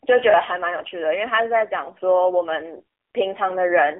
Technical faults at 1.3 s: AMR narrowband mobile codec

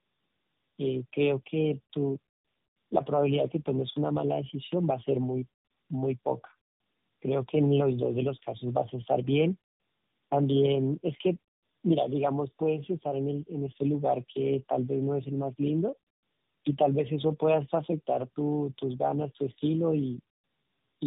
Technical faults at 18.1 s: tandem speech coding

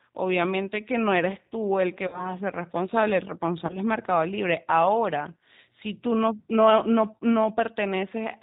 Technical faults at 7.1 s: G.729 codec

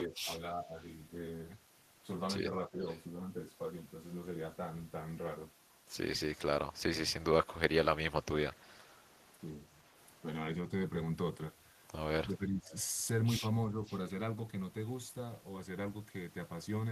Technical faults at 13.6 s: speech suppressed in double talk

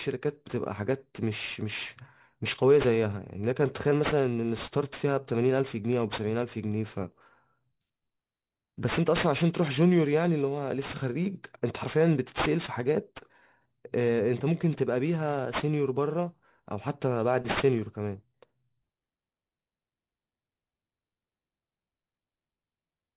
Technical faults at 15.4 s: aliasing

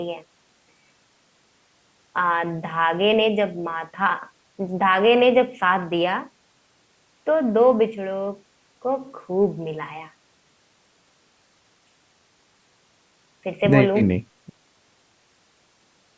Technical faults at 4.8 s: none

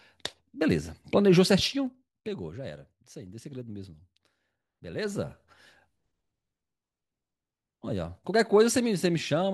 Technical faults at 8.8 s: none

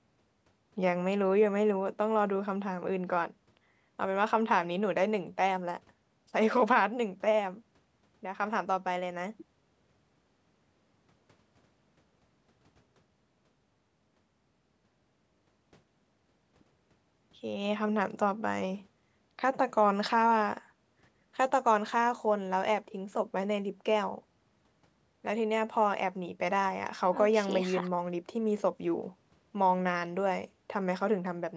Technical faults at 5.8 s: none

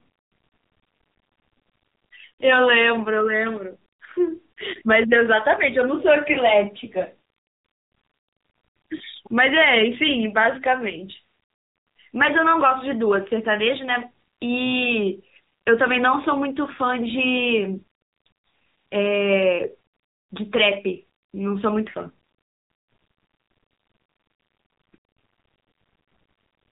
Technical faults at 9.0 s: AMR narrowband mobile codec; lost AMR speech frames

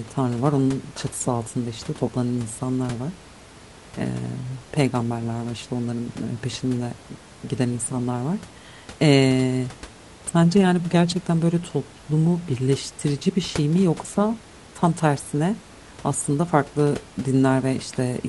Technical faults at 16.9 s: none

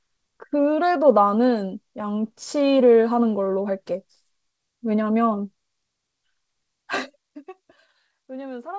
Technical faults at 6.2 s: none

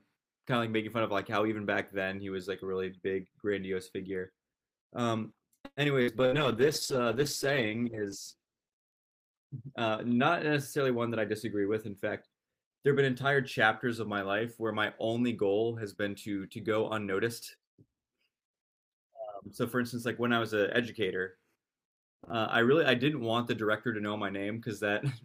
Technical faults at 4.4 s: none

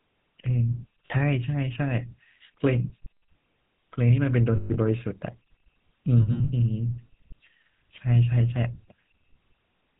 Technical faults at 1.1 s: GSM full-rate codec; lost GSM frames

